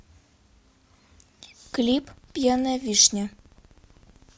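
Filter restarted on every block from 1.66 s to 4.37 s: each block starts from silence, leaving a level-following 15.6 Hz ticking buzz that fits 1024-sample blocks.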